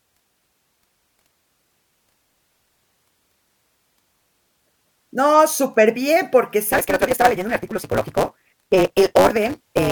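From 6.72 s, right after "superbién porque", until the end, the speech shows a block size mismatch (truncated). One stage hands over longer blocks than the next reads, so each block's tail is discarded. The speech runs 1.88 times too fast at roughly normal pitch, with a 188 Hz buzz, which fits 256-sample reads. A spectrogram shows evenly spaced vertical striations and harmonic lines at 188 Hz. The waveform shows abrupt splice steps at that rate.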